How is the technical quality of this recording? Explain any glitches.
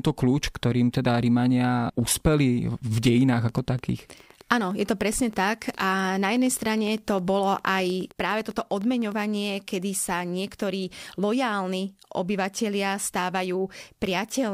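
The recording has one clear glitch. From 2.98 s to 9.13 s, just before "kedy sa niektorí lojálni", a train of clicks ticks steadily at about 9.8 per second, some seventy in all, roughly as loud as the speech and audible in pauses. It is likely interference or a faulty connection or power supply injecting repeated pulses. The waveform shows evenly spaced spikes, and the spectrogram shows thin vertical broadband lines.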